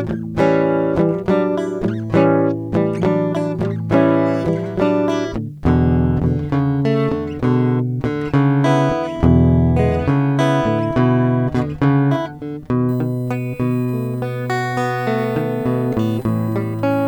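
A piece of music that, from 12.89 s to the end, carries a thin, steady whine of fixed pitch sitting roughly 30 dB below the music. It is built on 1 kHz, with its strongest component at the 16th harmonic, 16 kHz. This is USB whine: the 1 ms frame rhythm of the USB bus pulls current in regular bursts, and that pulse leaks into the audio through shared power or ground.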